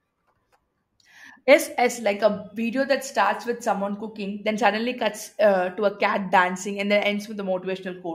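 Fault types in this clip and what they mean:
No technical fault can be heard in this speech recording. There is nothing here that needs a fault line.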